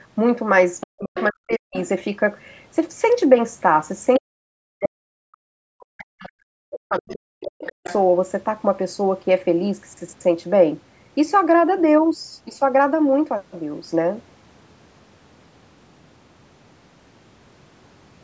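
From 0.8 s the other side's voice leaking through pops up as faint scraps, likely echo the canceller missed. It comes back at 1.15–1.88, 4.16, 6.22 and 6.97–7.96 s, at times only about 10 dB under the talker. Across 0.84–1.76, 4.19–5.11 and 5.5–7.85 s the talker dips sharply, by as much as about 40 dB. That's likely speech suppressed in double talk, with the canceller ducking both sides at once.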